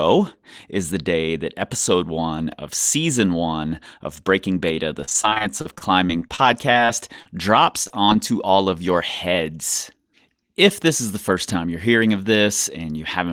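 The clip is speech with two faults. Repeated packet loss with robotic sound runs from 5.01 to 7.28 s, with 18 short holes, the longest 34 ms. It returns from 7.84 to 8.20 s, with five holes, just before "all of your heads". Each hole is filled by stretching the last sound, so the speech turns choppy with pieces missing. A jitter buffer speed-up follows from 11.59 to 12.02 s, right after "this is the first". The receiver trimmed about 50 ms of pitch periods to shrink an overfull buffer. Speech plays at 109% speed with unchanged pitch and sounds hurried.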